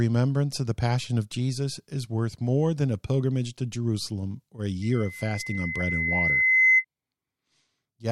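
At 4.82 s, right after "or a", a loudspeaker feedback squeal begins and runs until 6.85 s. The microphone is picking up the loudspeaker it drives, and at 2 kHz the loop gain rises above one, so that frequency reinforces itself on every pass. It is heard as a single tone that swells over roughly two seconds into a piercing whistle, ending up about 10 dB louder than the speech around it.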